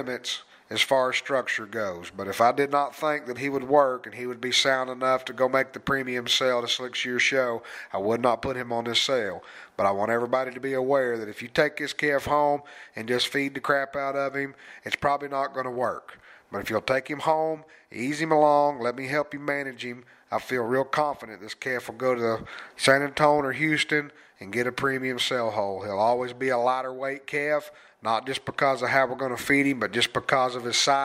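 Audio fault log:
No faults heard in this recording.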